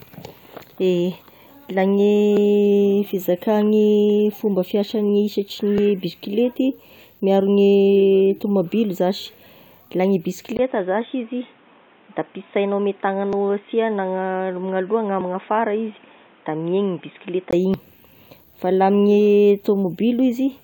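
At 2.37 s and 5.78 s, just before "bisikilety miaro", there are small jumps, likely a dropped buffer (overrun) losing about 20 ms each. From 10.57 s to 17.53 s the sound goes dull, with faint new background noise about 35 dB down, and a short gap at the switch. The level stays about the same. The input likely switched to a poorer device. Inside that stretch, overruns skip again at 13.33 s and 15.21 s, and just after it a longer one of about 50 ms hits at 17.74 s.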